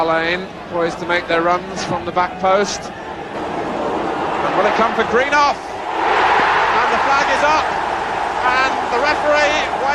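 A sudden voltage step, likely from a plug, switch or static discharge, reaches the signal path, and the circuits downstream shape it into a short pulse. This is a loud pop. Between 1.91 and 2.09 s there are two in quick succession, peaking about 5 dB above the surrounding audio. From 6.40 to 6.42 s a single pop rises about 10 dB above it. Each sounds like a hard thump laid over the sound, which continues underneath.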